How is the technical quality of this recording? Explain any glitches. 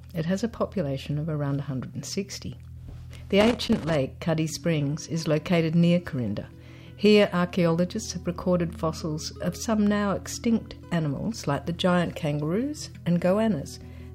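There's one glitch worth flagging: a burst of loose connector crackle from about 3.41 to 3.95 s, so roughly half a second. It comes from a worn or dirty contact somewhere in the cable run that keeps making and breaking as it shifts. The signal gets chopped on and off in quick succession, and any DC sitting on the line turns each break into a pop. You hear it as an uneven scratchy crackle riding over the sound.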